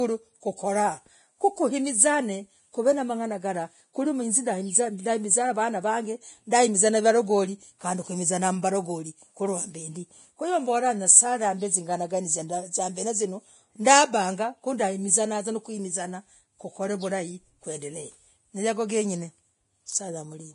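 The speech was most likely squeezed through Vorbis compression at a low bitrate, around 30 kbps, and the damage is heavy across the whole clip. The encoder has dropped everything above about 10.5 kHz and spent too few bits on the remaining treble, so fine high-frequency detail is replaced by noise of similar energy. The result is a hissy, grainy top end, roughened tonal sounds and softened, smeared consonant attacks from start to finish.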